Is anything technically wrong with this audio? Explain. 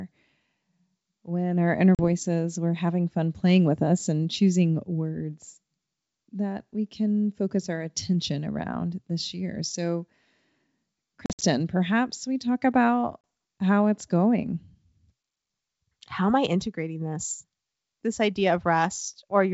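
Yes. Packet loss on an ADPCM call cuts into the speech three times. At 1.95 to 2.03 s, after "when our inner", about 40 ms is missing. At 11.26 to 11.43 s, just before "perhaps we talk about", about 110 ms drops out in bursts spread over 160 ms. At 13.24 s, before "how it's going", about 30 ms goes. Each gap is a hard-edged silence. The decoder's adaptive predictor and step size then no longer match the sender's, so the speech comes back slightly distorted before settling. That rough recovery sets it apart from a plain dropout, which resumes cleanly. The wideband G.722 coding carries the speech clearly up to 7 kHz.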